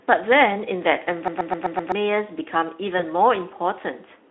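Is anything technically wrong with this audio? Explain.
Yes. There are two faults.

From 1.28 to 1.92 s there is a system hang loop. The computer or its audio driver stalled. The sound hardware kept replaying the same ring buffer. One 128 ms slice of speech repeats exactly, five times. The repeat rate is about 7.8 per second. That length fits a 2048-sample buffer. The result is a machine-gun stutter, not a steady buzz. About 0.7 s of real speech is lost behind it.

From 2.97 to 3.01 s, VoIP packet loss is concealed by the speech codec. The lost audio points to a single 20 ms frame. The decoder had nothing new to play. It extended the last pitch and filter shape and lowered the gain as it went. That gap turns into a brief stretched sound that fades. The voice also sounds weak or distorted for a moment after real packets return. This happens because each decoded frame builds on the one before it. 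The call is carried by the Speex codec over a line that holds speech to a narrow 250 Hz to 3.5 kHz band.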